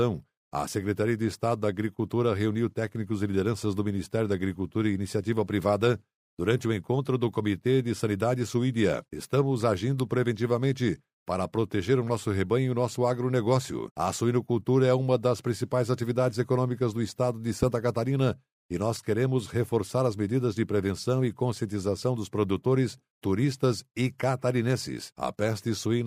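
At 17.63 to 17.65 s, a single loud pop jumps well above the speech. It is likely a sudden voltage pulse in the chain. The speech continues underneath.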